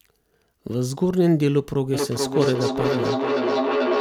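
From 1.94 s to the end, the speech returns as a delayed copy of itself roughly every 0.4 s, with the loudest repeats only about 3 dB below the original, so they sit almost level with it. This is feedback echo between two devices: a second device in the same room on the same call plays the sound back into a microphone, and since each echo canceller removes only its own device's output, the loop keeps returning at that fixed interval.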